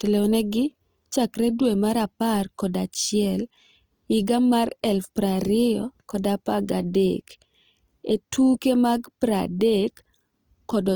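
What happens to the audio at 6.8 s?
At 6.8 s the speech sounds rough and grainy, with a noisy texture over tonal parts, and this is true of the whole clip. Likely cause: Opus compression in its music (CELT) mode, at a rate that points to about 24 kbps, filling starved bands with noise or folded copies.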